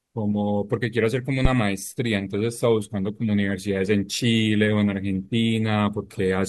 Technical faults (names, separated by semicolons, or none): phantom power thump